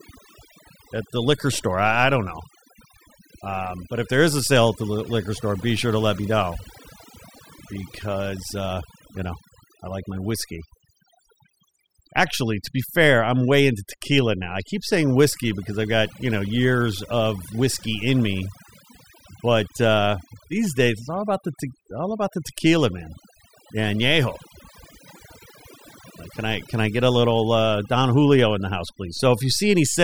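Overdone noise removal runs through the whole clip: a noise reducer set far too strong pulls each frequency band down whenever it sits close to the estimated noise floor, taking quiet parts of the voice with it. Pauses fall to near silence with twinkling specks.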